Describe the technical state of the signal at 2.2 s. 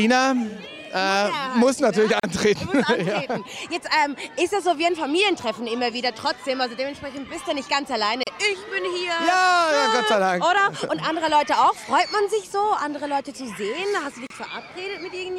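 At 2.20 s a gap at a join of encoded pieces opens, lasting about 38 ms until 2.23 s: encoder start-up delay and last-frame padding left untrimmed. It sounds like a brief dropout; the waveform shows a near-flat notch, the spectrogram a thin vertical blank band, recurring every 6 s.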